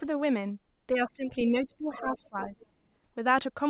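From 0.93 to 2.65 s the speech dips in level. The deepest drop is about 15 dB. Around one and a half seconds of that span is affected. This is speech suppressed in double talk. The likely cause is both sides talking at once. The echo canceller could not tell the near talker from the loudspeaker echo. So it turned everything down, and the voice sank with it.

From 1.93 to 2.66 s a second voice comes through faintly underneath. It sits about 20 dB below the main speech. This is the other side's voice leaking through. The far end was likely playing on a loudspeaker, and the microphone picked it up again. The echo canceller did not remove all of it. A residue stayed in the signal. Like the rest of the clip, it is band-limited to 4 kHz by the telephone-grade codec.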